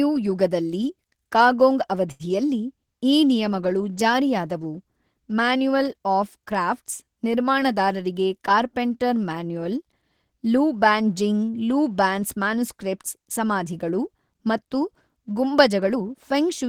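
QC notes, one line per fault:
2.11–2.23 s, short stall from a late packet: right after "ಯುಗದಲ್ಲಿ ಕಾಗೊಂಗ್" the speech hangs on one sound for about 82 ms. A packet had not arrived when due, so the jitter buffer ran dry and the receiver kept extending the last bit of audio until the packet turned up, then picked up exactly where it left off. Nothing is lost, but the sound is drawn out with a faint buzz or dip, and playback now runs 82 ms later than before.
15.54–16.40 s, jitter buffer speed-up: the speech runs at about 109% of normal rate with its pitch unchanged, so it sounds rushed. The buffer held more audio than its target, so the receiver removed short slices one or a few pitch periods long, again and again across this stretch, taking out roughly a tenth of a second in total to pull the delay back down.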